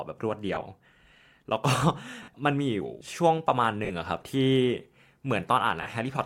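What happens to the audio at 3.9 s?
Lost LE Audio frames from 3.85 to 3.91 s: about 50 ms of audio went missing, and the LC3 decoder refilled it by repeating the last spectrum with random signs. On a spectrogram the speech harmonics blur into a noisy smear, and the waveform shows fading, irregular fill.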